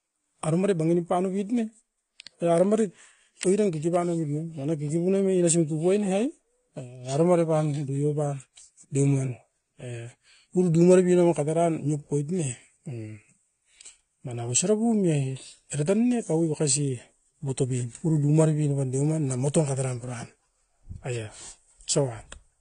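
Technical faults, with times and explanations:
Throughout, AAC compression: the speech sounds dull and smeared, with nothing above 10 kHz and a plainly audible warbling, fizzy texture on sibilants and held vowels. The likely cause is AAC-LC coding at a low rate, consistent with about 32 kbps. At that rate the encoder drops the top band and quantises the remaining frequency lines so coarsely that parts of the spectrum empty out or shift from frame to frame.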